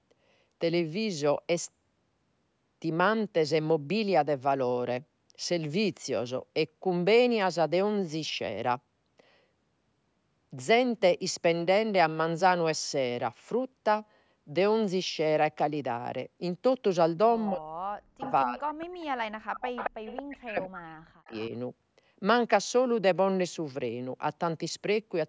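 Speech suppressed in double talk runs from 17.51 to 19.85 s, with about two seconds of the talker dipping by as much as about 40 dB. This is likely because both sides spoke at once and the echo canceller muted its own talker along with the loudspeaker echo. Echo leak appears within and after it, at 18.2–18.32 s (about 15 dB below the speech), 19.01–19.05 s (about 30 dB down) and 19.77–20.23 s (nearly as loud, about 5 dB down). Each is a delayed copy of the voice trailing by 222 ms, likely from a loudspeaker echo that the far end's canceller did not fully remove and sent back. Suppression returns from 20.23 to 21.35 s, again dropping as much as about 40 dB for about a second. A final faint echo scrap, about 25 dB down at the same 222 ms delay, overlaps its end from 21.25 to 21.49 s.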